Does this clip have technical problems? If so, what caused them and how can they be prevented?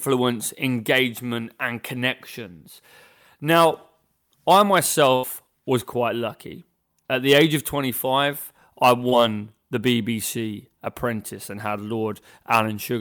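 Yes. There is a burst of packet loss from 5.15 to 5.25 s. Several consecutive packets failed to arrive in time, and the receiver filled about 78 ms by extending the last sound and fading it down, giving a held buzz or decaying hiss. When the real stream resumes, about 80 ms of speech is simply gone. A deeper jitter buffer combined with forward error correction or redundant packets would prevent this.

A short concealed packet loss occurs at 9.09 to 9.14 s. Here about 20 ms of audio did not reach the decoder, and the receiver synthesised about 24 ms to cover the hole, continuing the preceding sound and cross-fading back into the real signal. The result is a brief smear or wobble, and any short consonant in that span may be lost. In-band FEC or a more stable network path would prevent it.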